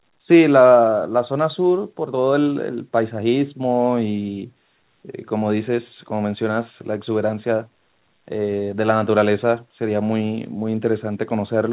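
The speech in this clip carries no technical faults. It has come through a WebRTC call path, and nothing is heard above about 4 kHz, which fits a narrowband telephone codec such as G.711 at 64 kbps.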